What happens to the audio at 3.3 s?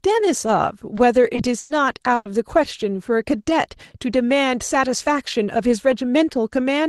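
Nothing goes wrong at 3.3 s; the speech passes through the call path intact there, with no dropout, glitch or distortion at that point.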